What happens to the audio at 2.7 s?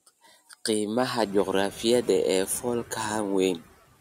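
At 2.7 s the speech carries hard clipping, which runs through the whole clip. The signal is driven about 5 dB past what the stage can pass, so only a small fraction of peaks are sliced flat. Those squared tops add high harmonics, heard as brief crackle on the loudest syllables.

Noise suppressor artifacts are also present there, as they are throughout. The suppressor pulls down the bands it judges to be steady noise by about 18 dB, frame by frame. The room noise, which rose around 1 s and sits about 20 dB under the speech, therefore dips between words and swells beneath them.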